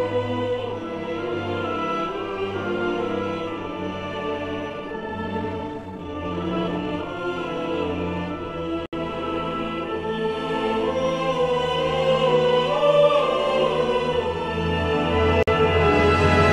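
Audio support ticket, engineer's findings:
Gap at a join of encoded pieces, twice. First dropout 8.86 to 8.93 s, about 69 ms gap; second 15.43 to 15.48 s, about 48 ms. Holes with edges smeared by the codec, and the sound picks up right where it left off. Points to segments encoded separately and butted together untrimmed: encoder start delay plus last-frame padding left in at each seam. Check the concatenation step, trim priming and padding.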